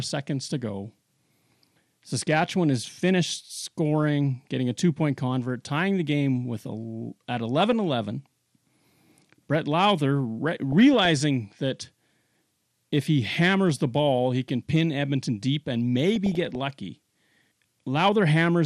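Throughout, the speech has the dull, gurgling, granular sound of MP2 compression: too few bits likely switched off upper sub-bands and coarsely quantised the rest, which fits roughly 80 kbps. DAB burbling follows, where a small fraction of bit errors slipped past error correction and corrupted sub-band samples, causing short blips of noise in single sub-bands from 7.60 to 7.73 s after "game with a at", from 10.72 to 11.06 s, and from 16.16 to 16.56 s after "deep and".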